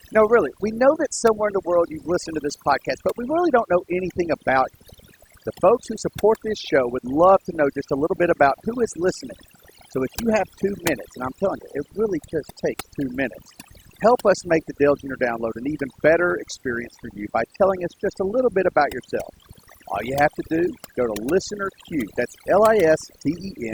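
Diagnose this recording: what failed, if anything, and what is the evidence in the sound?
Overdone noise removal, applied at the call-processing or post-production stage, affects the speech across the whole recording. The background drops to near silence broken by twinkling specks. A noise reducer set too strong is switching off individual frequency bands whenever they sit close to its noise estimate, and the softer parts of the voice vanish along with the noise. On a spectrogram this shows as a clean floor scattered with isolated tonal flecks, with holes eaten into the speech harmonics.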